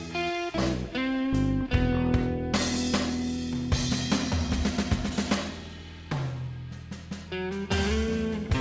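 At 0.58 to 0.60 s the music jumps forward in a skip ahead: roughly 0.4 s of audio is dropped, either in transit or by the jitter buffer discarding a backlog of waiting audio, and the two sides are spliced together with no silence or fill. It sounds like a sudden lurch in the music's flow. On a waveform the envelope changes abruptly at the join. On a spectrogram a vertical seam cuts the harmonics, all of them stopping short of 8 kHz, which fits a G.722 call codec.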